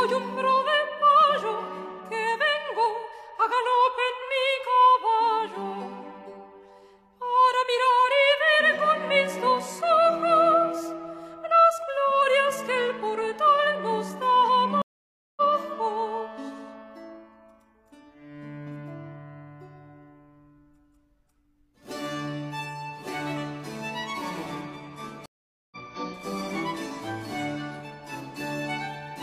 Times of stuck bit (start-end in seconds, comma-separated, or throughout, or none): none